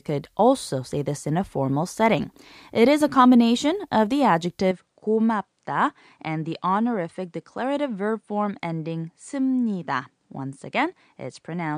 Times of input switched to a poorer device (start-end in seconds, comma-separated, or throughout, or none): 4.71-11.77